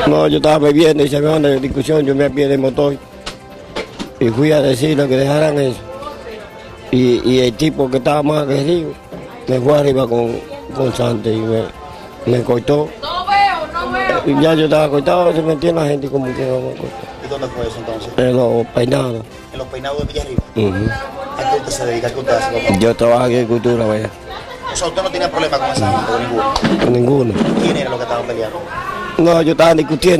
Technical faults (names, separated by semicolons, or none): none